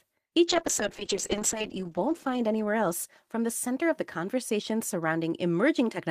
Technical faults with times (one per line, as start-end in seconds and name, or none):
0.47-3.81 call bitrate drop